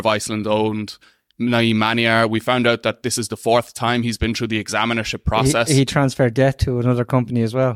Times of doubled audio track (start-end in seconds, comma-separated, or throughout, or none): none